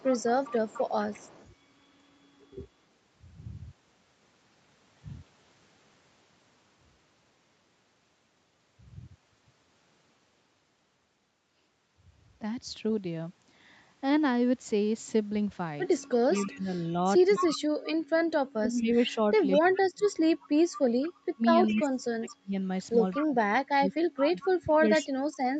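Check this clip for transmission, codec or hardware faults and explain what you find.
Two faults can be heard, both tied to echo control on a speakerphone call: repeated echo leaks and suppression of the near talker during double talk.

Echo leak, at 0.00–1.48 s, 16.03–17.56 s, 18.77–19.78 s, 21.02–23.24 s and 24.41–25.04 s. The far side's loudspeaker sound was picked up by its microphone and likely not fully cancelled, so it came back down the line. A delayed copy of the speech trails it by about 0.21 s, sitting roughly 20 dB below in most spots, about 15 dB below at 21.02 s, and nearly as loud as the speech at 16.03 s.

Speech suppressed in double talk, from 16.01 s to the end. With both sides talking, the echo canceller likely could not tell the local talker from returning echo and turned everything down together. The speech dips, thins and drops out in pieces, falling by as much as about 35 dB at its deepest, all while the echo bursts above keep leaking through. 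The whole band stops near 8 kHz, consistent with the call path's wideband setting.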